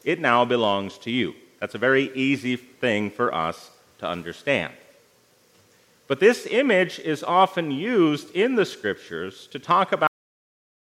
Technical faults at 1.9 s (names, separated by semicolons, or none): none